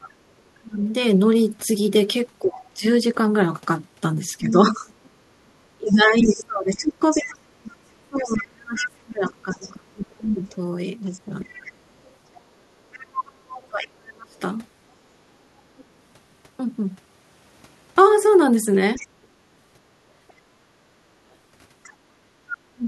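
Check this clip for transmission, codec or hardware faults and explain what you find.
Two echo-control faults run through this speech clip. The talker's voice is suppressed in double talk, and the other side's voice leaks through.

Speech suppressed in double talk occurs from 0.0 to 14.37 s and again from 22.49 to 22.84 s. In the first stretch the talker's voice dips and drops out in pieces, about seven seconds in total. The deepest cuts reach roughly 30 dB. The short second event is about 0.3 s. The likely cause is an echo canceller that heard both sides at once. It could not separate the talker from the loudspeaker echo, so it turned everything down.

The other side's voice leaks through from 2.65 to 15.84 s and from 18.95 to 21.93 s. In the first span a second voice sits about 10 dB below the talker. In the second span it is fainter, about 20 dB down. This is likely residual loudspeaker echo. 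The far end played on the device's speaker, and the canceller left part of it in the microphone signal.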